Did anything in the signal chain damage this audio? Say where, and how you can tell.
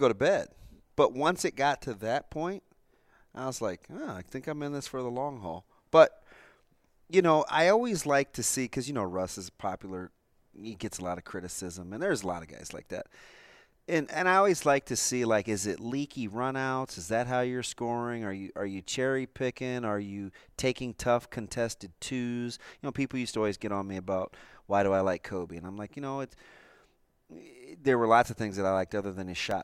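No, nothing in the signal chain audibly damaged this speech recording; every stage from capture to playback carries it through intact.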